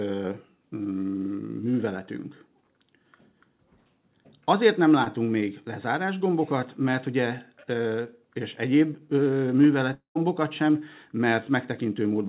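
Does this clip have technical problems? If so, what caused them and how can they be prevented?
Yes. From 5.04 to 5.08 s, on a call path carried as G.711 at 64 kbps with nothing above 4 kHz, the sound briefly smears. That is short concealed packet loss: about 20 ms arrived too late, so the decoder extended the preceding sound and blended back. A larger jitter buffer or forward error correction would prevent it.

From 9.94 to 10.17 s the sound becomes a fading continuation, then about 0.12 s of silence, before resuming with 0.22 s missing. The likely cause is a long network dropout that outlasted concealment. A steadier connection, for example wired rather than wireless, would prevent it.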